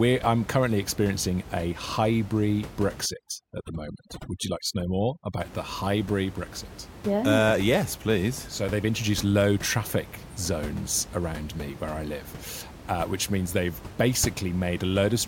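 Speech, with room noise sitting about 15 dB below the voice. From 3.06 to 5.40 s, between "currently experiencing a hybrid" and "the hybrid", the background drops and breaks up into twinkling specks. This is overdone noise removal: the reduction is set so aggressively that it shuts down individual frequency bands near its noise estimate, and the quieter parts of the voice are cut along with the noise.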